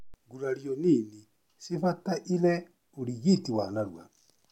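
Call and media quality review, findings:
No faults detected in playback.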